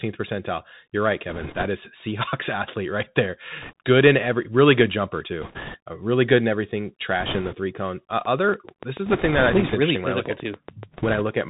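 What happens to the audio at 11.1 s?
At 11.1 s two faults overlap. The first is a train of clicks running from 8.25 to 11.42 s: about 20 sharp pulses of much the same shape, arriving regularly at roughly 7 per second and peaking about 10 dB above the sound, so they tick through pauses too. The likely cause is electrical interference from nearby equipment or a faulty connection or power supply. Unlike bit errors, each click is a distinct, loud, repeated event.

The second is bit errors on a Bluetooth voice link, from 10.93 to 11.22 s, on a path already narrowed by the CVSD headset codec, which cuts everything above 4 kHz and adds granular hiss. Flipped bits in the one-bit up/down CVSD stream, at roughly a 2% error rate, each nudge the waveform only slightly and then fade. The result is a rushing, crackly noise under the sound for that short stretch rather than loud discrete pops, which is what separates it from the clicks.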